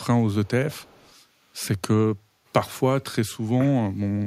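Right at the start, from 0.00 to 0.05 s, then again at 0.44 to 0.49 s and for a longer stretch from 0.70 to 1.16 s, a delayed copy of the speech trails the original by about 270 ms, sitting roughly 30 to 35 dB below it. That's an echo leak, likely from a far end on a loudspeaker whose echo canceller didn't fully strip out what its microphone caught, so the leftover got sent back down the line.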